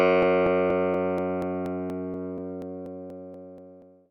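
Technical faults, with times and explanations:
0.23 to 4.06 s, periodic USB or driver dropouts: every 0.24 s a blocked USB bus or audio driver skips roughly 10 ms of audio, so the waveform jumps and ticks about fifteen times. The strictly even spacing sets this apart from random packet loss.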